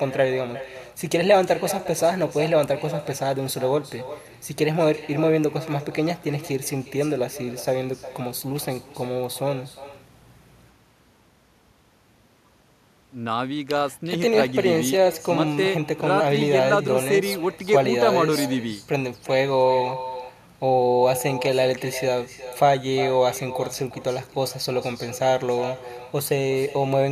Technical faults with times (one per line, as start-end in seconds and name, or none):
0.00-27.12 echo with no canceller